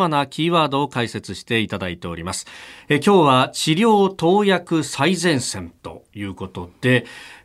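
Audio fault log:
6.38 s, block of digital silence: the audio path failed to deliver one block of samples in time, so the output was filled with zeros for about 2.9 ms, which fits a 128-sample buffer going out empty. The speech drops straight to digital silence and jumps straight back with no fade either way. The gap is so short that it comes across as a tick or dip rather than an audible hole.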